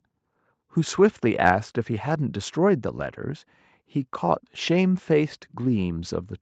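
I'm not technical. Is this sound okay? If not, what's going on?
Yes, nothing has gone wrong in this speech recording. It has been through an ordinary online call, so the very top of the sound stops at about 8 kHz and the lowest bass is trimmed away, just as on a normal call.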